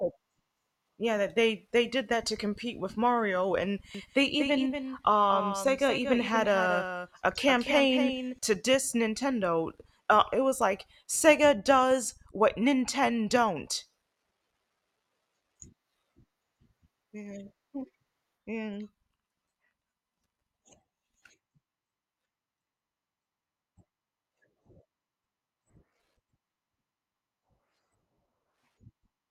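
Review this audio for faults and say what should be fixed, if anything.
A doubled audio track runs from 3.95 s to 8.39 s. A second full-band copy of the speech trails by roughly 200 ms at about 10 dB below the original, with no decay. It starts and stops abruptly, likely from a slower parallel capture path mixed in. Route each source through a single capture path and mute any monitoring or return feed before mixing.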